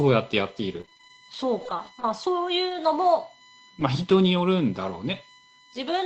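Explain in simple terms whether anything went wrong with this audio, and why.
Yes, several things went wrong. Throughout the recording there is a steady, faint high-pitched whine at 1 kHz, loudest at 2 kHz. This is USB whine: the computer's USB connection draws power in rapid regular bursts, and that electrical rhythm leaks into the audio as a fixed tone.

From 0.81 to 1.79 s the speech turns choppy and robotic, broken by many tiny holes, the longest about 22 ms. This is repeated packet loss (robotic sound). Small chunks of audio kept getting lost or arriving late on the call, and each hole was patched by stretching out the sound just before it.

Between 2.65 and 2.75 s the speech briefly sounds rougher and noisier, with no gap. This is a lost packet rebuilt from error correction. Some audio went missing, but the following pieces carried a spare, lower-quality copy, and about 60 ms was filled in from those copies.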